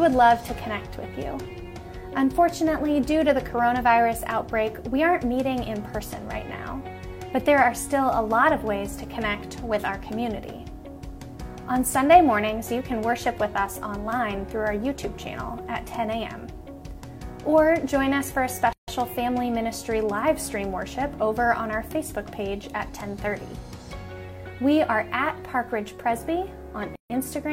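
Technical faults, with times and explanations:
18.73 s and 26.96 s, gap at a join of encoded pieces: the sound drops into silence for about 150 ms and then 144 ms, with abrupt, smeared edges, then resumes where it stopped. Separately encoded segments were joined untrimmed, so each encoder's start delay and final-frame padding remain as silence.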